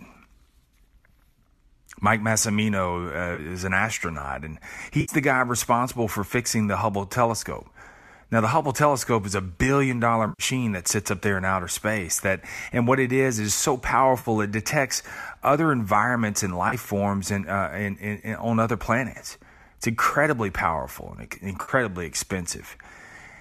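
AAC frame loss with concealment occurs at 3.35, 5.01 to 5.14, 10.29, 14.19, 16.69 and 21.62 s. Gaps of 30 to 100 ms, likely on a low-delay AAC link, are refilled from the last good spectrum. They sound like brief smeared, phasey patches. A spectrogram shows flat blurred vertical bands, and the waveform envelope stops following the syllables.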